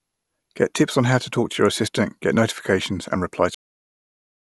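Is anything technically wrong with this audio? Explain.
Yes, the clip has a cut-off end. At 3.55 s, right after "get notifications and reply", the speech stops abruptly in the middle of a sound and falls straight to digital silence with no natural decay. That silence continues for about a second until the clip finishes at 4.54 s. The last buffers of audio were never written out or played, so the recording ends mid-sound rather than fading or closing naturally.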